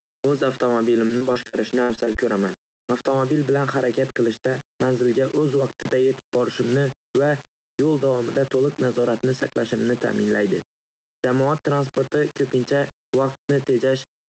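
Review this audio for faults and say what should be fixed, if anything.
Low bit depth without dither runs through the whole speech clip. Quiet passages sound gritty and grainy. The error tracks the signal, roughly 20 dB down, which fits likely rounding to about 5 bits.

Gain pumping is also present throughout. The gain swings around 10 dB. Input gain set far too high is likely being squashed by a fast limiter.

Repeated packet loss (robotic sound) covers 1.07 to 2.17 s. There are about eight patched holes, the longest about 65 ms. Continued sound fills them, so this stretch turns choppy.

A burst of packet loss hits 2.73 to 2.80 s. About 60 ms is missing. The last sound is stretched and faded, then the speech jumps ahead.

Short concealed packet loss follows at 2.80 to 2.85 s and 2.85 to 2.90 s. Each drops about 40 ms. The patches come across as quick smears right after the burst.

To prevent these faults, record at 16 bits or more with dither, lower the microphone gain so the limiter stays idle, and stabilise the network or enlarge the jitter buffer.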